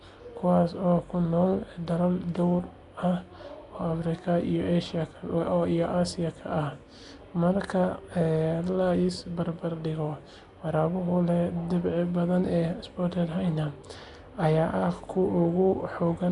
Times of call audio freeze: none

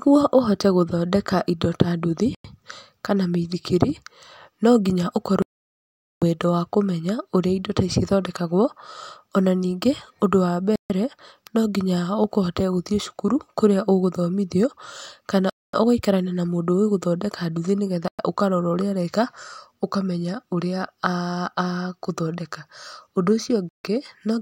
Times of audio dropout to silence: 5.42-6.22

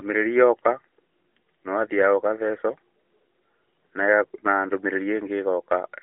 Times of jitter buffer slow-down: none

